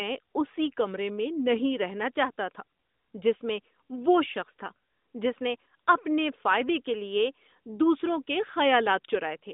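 No technical faults can be heard in the speech, which arrives over an AMR narrowband mobile link at 12.2 kbps, confined to the telephone band of 200 Hz to 3.7 kHz, with only light coding colouration.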